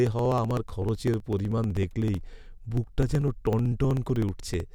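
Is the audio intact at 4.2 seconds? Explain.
No. At 4.2 seconds the clip is inside a run of periodic USB or driver dropouts lasting from 0.07 to 4.66 s. Roughly every 63 ms, something blocks the audio path and about a millisecond of speech is skipped outright, so the waveform jumps abruptly. Each gap sounds like a regular tick during the speech. On a spectrogram these appear as evenly spaced thin vertical broadband lines; in the waveform they appear as tiny step discontinuities.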